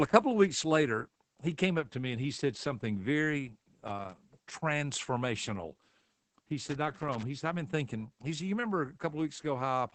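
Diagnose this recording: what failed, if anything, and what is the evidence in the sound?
Throughout, the speech sounds muffled and slightly hoarse and robotic, with nothing above about 8.8 kHz. This is Opus voice compression at the codec stage: the SILK linear-prediction coder runs in wideband and codes the excitation coarsely, which fits a low rate near 12 kbps.

From 6.67 to 7.23 s an irregular burst of crackle and scratching breaks through. This is loose connector crackle in the analogue wiring: a worn or dirty contact rapidly makes and breaks as it shifts, chopping the signal into brief dropouts and clicks.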